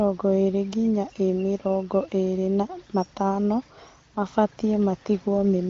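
Nothing goes wrong here: the speech rides an AMR wideband (HD Voice) link at 18.25 kbit/s, so everything above 7 kHz is simply absent, which is just how that codec carries it.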